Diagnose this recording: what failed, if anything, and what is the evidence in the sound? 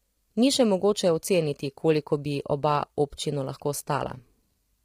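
Across the whole speech clip the voice sounds rough and grainy, with noise filling the gaps between harmonics and a thin, synthetic top band. The codec stage is the likely culprit: low-delay AAC compression, whose short frames resolve pitch poorly, heavily strained at a rate near 24 kbps.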